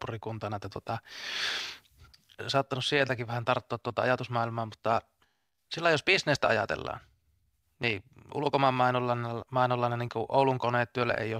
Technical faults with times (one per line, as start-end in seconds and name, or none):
none